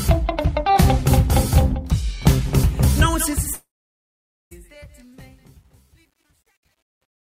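A fade-out stage that keeps only about 10 bits and applies no dither causes truncation distortion on a fade from 3.2 s to the end of the audio at 7.3 s. The fade itself starts at roughly 3.2 s, but as the level falls toward the smallest step the 10-bit word can represent, the waveform collapses into a few coarse square steps. From 4.5 s onward, the quietest part of the tail turns gritty. Overlapping this, a long network dropout between 3.53 s and 4.53 s removes about 980 ms of audio that never reaches the listener. For about 975 ms, the last received sound carries on as a fading buzz or hiss, which is the receiver's concealment stretching what it had. Roughly 850 ms of that stretch is silence, and the audio resumes at 4.53 s without the lost portion. The most likely cause is packets lost in transit rather than anything in the recording.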